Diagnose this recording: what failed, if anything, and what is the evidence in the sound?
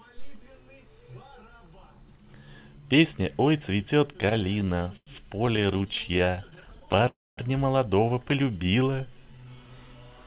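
Repeated stalls (stutter) show up in two stretches, so this is a network and jitter buffer problem. From 4.08 to 5.09 s there are 16 little hangs, the longest about 0.1 s, and roughly a quarter of that span is filler. From 5.47 to 7.05 s there are 31 tiny ones, none over 13 ms, about a fifth of the span. Packets kept landing late, the buffer drained, and the receiver stretched the last sound each time. Nothing's lost, it just drags and stutters.

Right after, at 7.08 to 7.39 s, you get a call audio freeze. About 0.29 s is filled in, most of it (around 0.23 s) gone quiet after the held sound dies away, and then the audio picks up where it stopped. That's likely packets held up in transit.

There's a short loose connector crackle from 8.28 to 8.34 s, a quick irregular scratchy burst. That points at the analogue wiring, a worn or dirty contact making and breaking as something moves and chopping the signal.

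From 8.44 to 9.75 s there's a jitter buffer slow-down. The audio runs at about 86% speed with the pitch unchanged, adding roughly 0.19 s, as the receiver repeats single pitch periods to rebuild its reserve. All of this rides on a narrowband call path with nothing above 4 kHz, which fits G.711.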